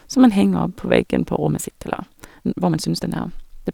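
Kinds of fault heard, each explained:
Time-stretched section: from 1.42 s to the end, after "opp på veggen på", the speech abruptly runs about 1.64 times faster while pitch holds steady, sounding rushed. This likely comes from software squeezing the passage to fit a length by dropping short pieces.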